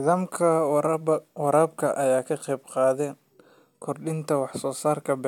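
No technical faults can be heard.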